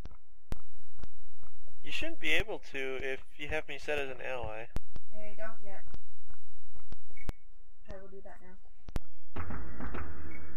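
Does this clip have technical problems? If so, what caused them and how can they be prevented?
Yes. Low thumps mark DC steps at 0.52 and 2.40 s, 4.77 and 7.29 s, and 8.96 s, where the waveform's zero line jumps by about -22 dBFS (about -20 dBFS last) and later snaps back. Prevent it by high-pass filtering or blocking DC at the converter input.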